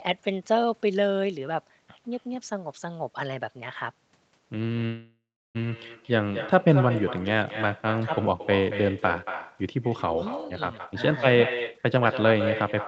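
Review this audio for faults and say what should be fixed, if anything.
Echo with no canceller runs through the whole recording. Each phrase returns about a fifth of a second later as a copy about 11 dB quieter and thinner. The far end is playing the call through a loudspeaker, its microphone picks that sound up again, and nothing subtracts it before it travels back, so the talker hears themselves trailing behind. Prevent it by enabling acoustic echo cancellation on the far end, or by using a headset there.

Call audio freeze, from 4.85 to 5.57 s. The sound stalls there. The last fragment is stretched into a fading buzz, and about 0.33 s of that stretch goes silent before the audio resumes exactly where it left off. The likely cause is packets held up in the network until the jitter buffer ran dry. Nothing is lost, but about 0.69 s of gap is inserted and the call's delay grows by that much. 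Prevent it by fixing the congestion or Wi-Fi trouble on the route, or by allowing the jitter buffer a deeper target.

Jitter buffer speed-up, from 10.73 s to the end at 12.87 s. Here the speech runs at 125% speed while its pitch stays the same, so it sounds hurried. The buffer was holding more audio than it wanted, as happens after delayed packets arrive in a burst. It trimmed out many short pitch-period slices in a row, roughly half a second in total, to bring the delay back down. Prevent it by smoothing the packet delivery so bursts don't pile up, which removes the need to catch up.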